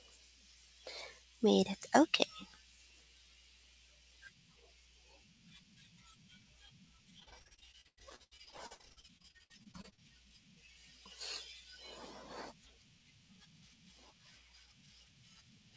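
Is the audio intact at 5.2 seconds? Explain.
Yes, the audio at 5.2 seconds is intact, with the speech passing through the WebRTC call path as expected and its band topping out at 8 kHz, which fits the G.722 wideband codec.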